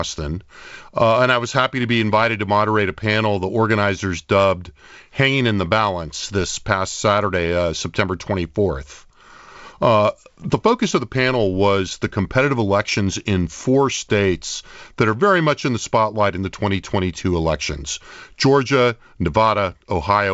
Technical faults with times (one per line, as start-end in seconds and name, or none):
none